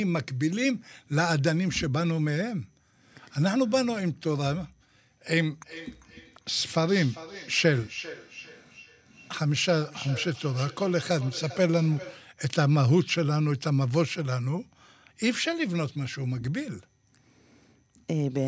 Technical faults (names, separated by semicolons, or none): feedback echo between two devices